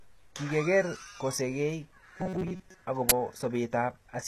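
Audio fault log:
throughout: HE-AAC compression, likely. Treble is rebuilt from lower bands, so s sounds turn gritty and metallic. The damage suggests a bitrate near 16 kbps.
2.18 to 2.82 s: robotic sound from repeated short buffers, likely. Most of the audio is replaced by repeats of a tiny slice, forcing a rigid 188 Hz metallic buzz.
3.09 to 3.12 s: uninitialised buffer. A loud burst of digital noise plays, lasting about 21 ms. Leftover memory was read as audio, which fits a 1024-sample block.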